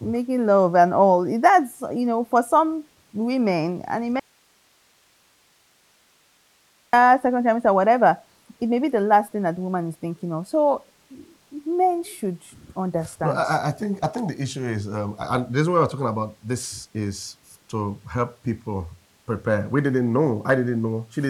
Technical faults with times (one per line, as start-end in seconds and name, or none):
4.20-6.93 audio dropout to a faint residue